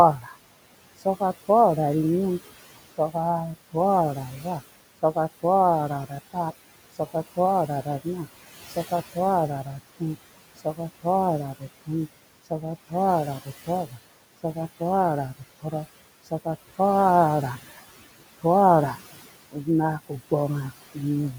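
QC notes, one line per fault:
Throughout: noise suppressor artifacts. The room noise, sitting about 16 dB below the speech, is pulled down by about 16 dB in the gaps and comes back up whenever speech is present, so the background pumps in step with the talking. Unlike clipped speech, the damage here lies in the residual noise and overall tone rather than in missing syllables.
0.2 to 1.49 s, 2.98 to 16.79 s and 17.78 to 21.36 s: speech cut by the noise suppressor. The suppressor mistook parts of the speech for noise and turned them down along with the background, by up to about 10 dB in the first span, about 18 dB in the second and about 17 dB in the third. Soft consonants and word endings come out swallowed or faint. Roughly 200 ms is affected in the first span, around a second and a half in the long middle stretch, and about 200 ms in the last. Unlike the steady pumping of the background, these are short dropouts in the speech itself.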